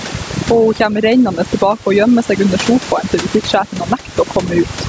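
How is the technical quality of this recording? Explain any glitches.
The technical quality is poor, with two faults running through the whole recording. The speech has no content above 8 kHz, which fits the call's microphone processing. The room noise sits about 28 dB under the speech.

Overdone noise removal is present from start to finish. The noise reduction was set far too strong. Frequency bands near its noise estimate are pushed down or cut entirely. Quiet parts of the speech fall below that threshold and vanish with the noise. The background drops and breaks up into small twinkling specks.

Gain pumping also runs throughout. The level rises and falls by roughly 15 dB. Loud and soft parts end up close in level, so the speech sounds squashed. The likely cause is input gain set far too high, with a fast limiter or compressor pulling it down on every loud sound.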